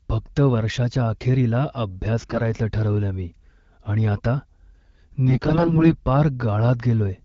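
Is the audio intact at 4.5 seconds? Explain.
Yes, at 4.5 seconds the audio is intact, with only the AMR wideband (HD Voice) codec at 12.65 kbit/s carrying the speech as it normally does.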